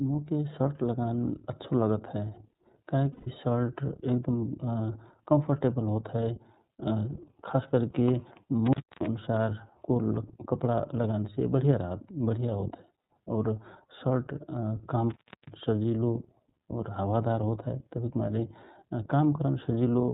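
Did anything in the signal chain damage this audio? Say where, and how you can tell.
Yes. The codec stage damages the whole clip: this speech is squeezed through the iLBC codec. Nothing above 4 kHz survives, so sibilants lose their edge, and every syllable carries a slightly rough, synthetic grain from coding each 30 ms frame's excitation on its own. The level of damage is plainly audible and fits iLBC's 13.33 kbps mode. Unlike a generic low-pass or a wideband codec, the artefacts are both band-limited and buzzy at the same time.

At the network stage there are lost iLBC frames at 3.12–3.28 s and 13.01–13.10 s, about 150 ms and 90 ms long. They are consistent with five and three missing 30 ms frames. The decoder fills each gap by repeating the last pitch cycle with added noise, so the voice hangs on a buzzy, breathy held vowel and then snaps back to normal immediately, because iLBC frames don't depend on earlier ones.

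At the analogue wiring, there is an intermittent contact at 8.66–9.07 s and 15.10–15.53 s. The second falls between "शर्ट काम" and "सजिलो और हावा दार". Here the signal drops out for about 280 ms and 318 ms with crackle at both edges, leaving faint hiss while the connection is open. A loose plug or cable briefly breaking the circuit explains this. Packet loss concealment would instead produce a held, slightly buzzy or breathy vowel, without the crackling edges or the bare hiss.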